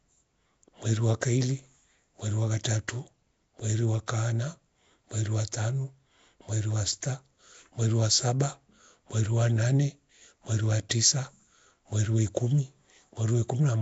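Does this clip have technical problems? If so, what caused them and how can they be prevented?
Yes. Throughout, the speech has a rough, hissy haze and a smeared, underwater colour, with nothing above 7.7 kHz. The likely cause is Nellymoser compression, which fits a rate around 32 kbps. That rate starves weak bands of bits, and the codec fills them with noise. Encoding with a modern codec such as Opus at a higher bitrate would prevent this.

At 2.64 s, just after "wa kaili mweru wa", and at 10.89 s, after "wa nane mweru wa", a short hiss of 12 to 13 ms arrives just before a sharp onset. This is pre-echo. Noise sized for the loud attack is spread over the whole coding block, including the quiet moment before it. A codec that switches to short blocks on transients would avoid this.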